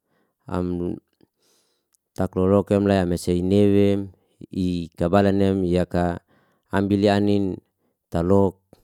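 Nothing is technically wrong with this speech recording.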